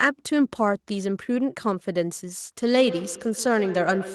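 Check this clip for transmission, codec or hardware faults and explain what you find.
There's one fault here, and it's in the last stretch. From 2.7 s to the end there's feedback echo between two devices. Another device in the room plays this microphone's sound back, the mic picks it up again, and the canceller can't remove it. That gives repeats roughly 150 ms apart, peaking about 12 dB below the speech.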